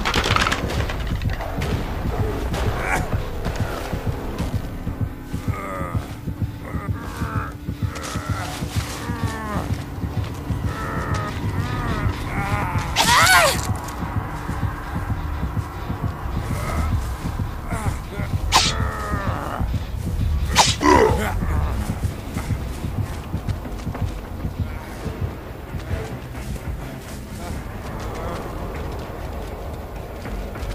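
Five short bursts of damaged data in a compressed stream occur at 3.12 s, 12.59 to 12.63 s, 16.67 to 16.70 s, 20.80 to 20.83 s and 26.56 s. Corrupted bytes make the decoder misread frames and hunt for the next valid header, producing brief chirps or squawks of 10 to 35 ms.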